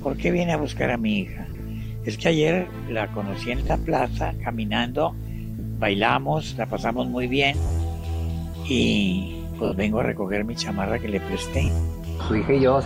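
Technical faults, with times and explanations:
1.50–1.60 s, 3.67–3.70 s, 5.59–5.63 s, 7.67–7.70 s, 9.65–9.72 s and 11.65–11.68 s, lost LE Audio frames: the Bluetooth link dropped 30 to 70 ms of audio each time, consistent with runs of 10 ms LC3 frames. The decoder refilled each gap by repeating the last spectrum with randomised phase, so tonal content briefly turns into a noisy smear. The first event is broken up, with about 60 ms lost over 100 ms and no gap longer than about 20 ms.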